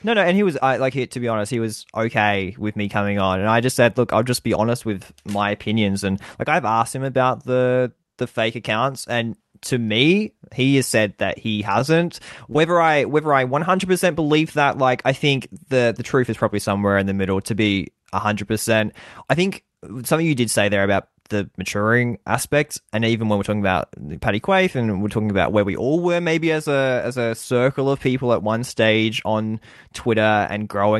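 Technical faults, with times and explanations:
12.52 to 12.57 s, short concealed packet loss: about 20 ms of speech missed the decoder's deadline, so the receiver extended the preceding sound for about 22 ms before blending back into real audio, heard as a brief smear or wobble.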